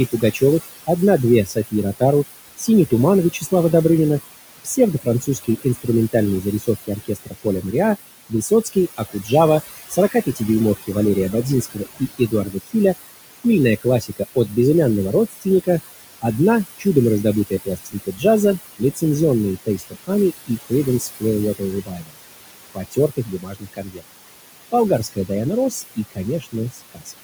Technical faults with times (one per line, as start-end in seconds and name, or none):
0.00-27.23 overdone noise removal
0.00-27.23 noise suppressor artifacts
0.12-3.52 speech cut by the noise suppressor
4.64-27.20 speech cut by the noise suppressor